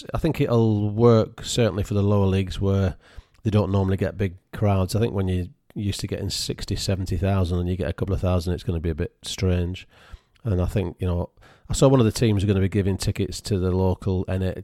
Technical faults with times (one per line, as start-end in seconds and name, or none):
none